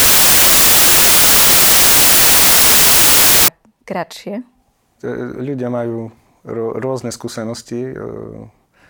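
Samples built from the wrong bytes corrupt this speech clip from 0.0 to 3.48 s. Each sample's bytes are assembled misaligned or in swapped order, so the rapidly changing low bits land in the most significant position, turning the speech into loud, harsh broadband noise, close to white on the louder sounds.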